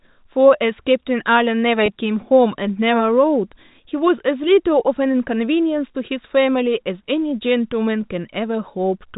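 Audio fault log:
1.86–1.88 s, packet loss with pitch repetition: about 20 ms of audio failed to arrive, consistent with one lost 20 ms packet on the G.711 telephone link. The receiver filled the hole by repeating the last pitch period of the speech over and over. Because the gap is so brief, there is no fade into silence. Instead the voice seems to hang on one pitch for an instant, giving a short, slightly buzzy held tone before speech resumes.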